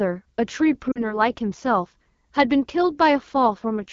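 From the start, the speech carries AMR wideband (HD Voice) codec damage. The coding rate points to 8.85 kbit/s, one of the two lowest. At that rate the vocal tract model is starved. The voice sounds rough and raspy, and the damage is plainly audible.

At 0.92 s lost AMR speech frames break in, with effects lasting to 1.19 s. The sound points to two frames, about 40 ms of speech. The decoder repeats its last good settings at falling gain. The voice smears, fades quickly, then returns briefly weak or rough.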